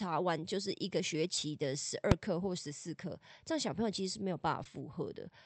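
A speech recording carried over a call path, with audio band-limited to about 8 kHz. Two short concealed packet losses appear, at 1.35 to 1.38 s and again at 4.63 to 4.66 s. In each, about 20 ms of audio arrived too late for the decoder. The receiver extrapolated from the preceding sound and crossfaded back, leaving a brief smear or wobble. At 2.12 s, invalid numbers at full scale produce a single loud bang. A calculation yielded infinite or undefined values that clipped to maximum amplitude for about 2.7 ms, which fits a 128-sample processing block.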